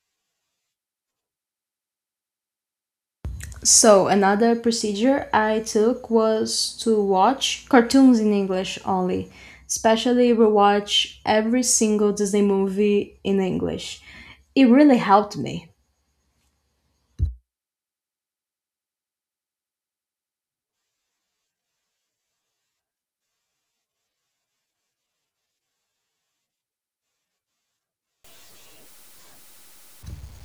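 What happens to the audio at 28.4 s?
At 28.4 s you're inside a stretch of grainy, signal-following distortion that runs from 28.24 s to the end at 30.44 s. It's likely low bit depth without dither, undithered truncation to around 9 bits, leaving quantisation error roughly 35 dB below the speech, so quiet parts turn gritty.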